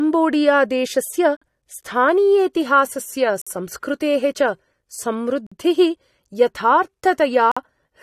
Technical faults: gap between chunks

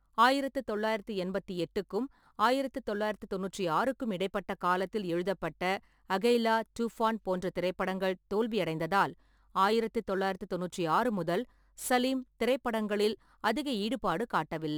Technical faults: crude rate conversion

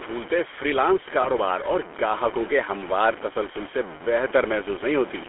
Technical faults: low bit depth without dither; GSM full-rate codec; lost GSM frames

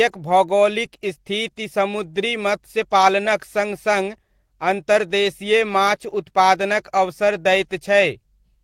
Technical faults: none

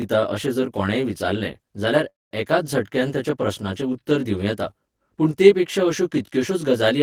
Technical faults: channel delay (comb filtering); call audio freeze

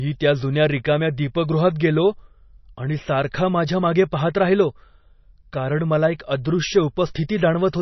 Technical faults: MP3 compression; pre-echo

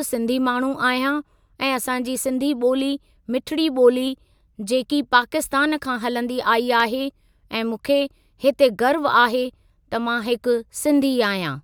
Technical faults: dropped samples

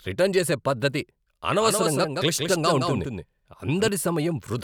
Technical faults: doubled audio track

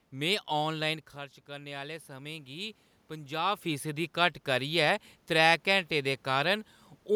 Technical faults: automatic gain rising

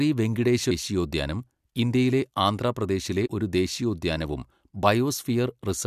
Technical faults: damaged data in a compressed stream

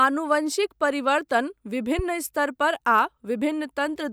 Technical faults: loud pop

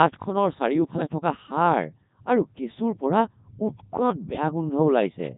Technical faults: Codec 2 vocoder

